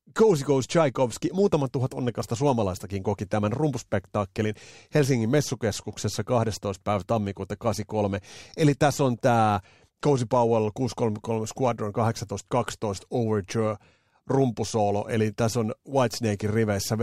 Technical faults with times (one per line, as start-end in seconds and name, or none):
0.11-17.03 clock slip clicks